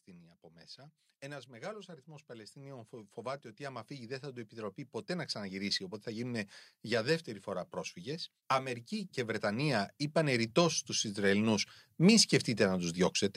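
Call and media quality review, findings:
Automatic gain rising, 0.76–8.88 s (about 15 dB) and 9.41–13.0 s (about 6 dB): AGC chasing quiet input, speech and background swelling up together.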